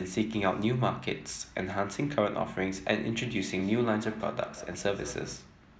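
Two devices on the same call are sharing a room, so one device's loudspeaker replays what the other's microphone sent, and that microphone picks it up again where no echo canceller removes it. This feedback echo between two devices runs from 3.16 to 5.53 s of the speech. Each word returns roughly a fifth of a second later, thinner and ringing, peaking about 15 dB below the speech.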